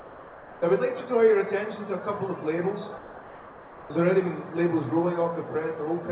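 From 2.98 s to 3.9 s, for 920 ms, the real background is replaced by a smooth, featureless hiss about 3 dB quieter, confined like the rest of the clip below 4 kHz. This is likely comfort noise in place of the background: with no active signal detected, the sender paused transmission and the receiver synthesised matching noise. Unlike a dropout or noise gate, the gap is never silent, just flat and detail-free.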